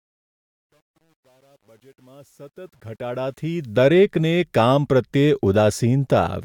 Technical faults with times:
0.00-3.87 truncation distortion on a fade

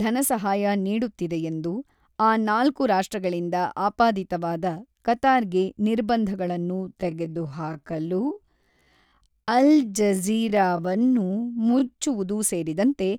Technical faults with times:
6.71-11.99 time-stretched section

